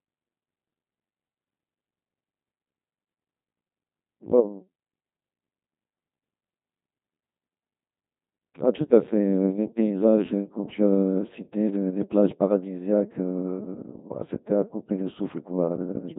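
From start to finish the speech runs through a Codec 2 vocoder, and the damage is heavy. Rather than carrying the waveform, the codec keeps only pitch, voicing, energy and a rough spectral envelope, then rebuilds everything from sine waves, so you get that robotic, buzzy timbre. The coarseness fits a 2.4 kbit/s mode, and nothing survives above 3.8 kHz, which leaves the speech sounding narrow and synthetic.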